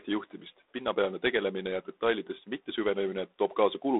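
A harsh, rasping hiss rides on the speech from start to finish, swelling and fading with its level, and nothing passes above about 3.8 kHz. This is G.726 ADPCM coding at reduced depth, which fits 24 kbit/s, where coarse difference steps leave audible quantisation noise.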